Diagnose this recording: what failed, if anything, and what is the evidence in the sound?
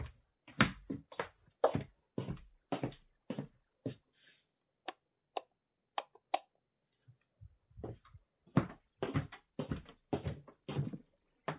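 Nothing in the signal chain failed: the everyday sound comes through with no dropouts, clicks, clipping, hum or timing irregularities at any stage from capture to playback.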